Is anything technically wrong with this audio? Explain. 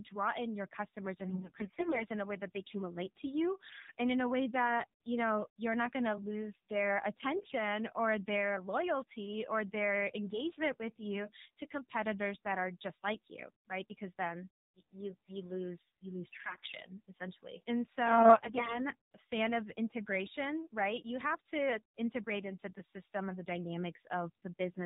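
Yes. Throughout, the speech has passed through the AMR narrowband mobile codec at 7.4 kbps. Nothing above 4 kHz survives. The coder rebuilds the voice from a vocal-tract model fed by sparse pulses. At this low rate that is plainly audible as a buzzy, synthetic tone.

AMR bit errors hit five stretches: 1.30 to 2.06 s, 3.70 to 3.92 s after "can relate to you", 7.36 to 7.55 s after "going to lose their", 16.32 to 16.73 s, and 18.06 to 18.84 s after "essentially and". Flipped low-priority bits misplace the excitation pulses and skew the fine parameters. Pitch and level hold roughly steady, but the voice turns hoarse, scratchy and gargly.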